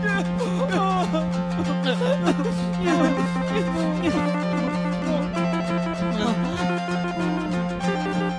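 No technical faults are audible anywhere in this music clip.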